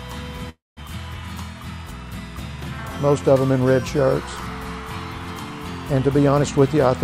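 At 0.49 s the sound stalls until 0.80 s in a call audio freeze. The tail of the last sound is stretched into a fading buzz or hiss, then about 190 ms of silence. Packets were likely delayed and the jitter buffer ran dry, inserting a 274 ms gap with nothing lost. From 6.35 to 6.91 s a jitter buffer speed-up plays the audio at 120% speed with unchanged pitch. A backlog in the buffer is trimmed by cutting pitch-period slices, about a tenth of a second in all, so this stretch sounds rushed.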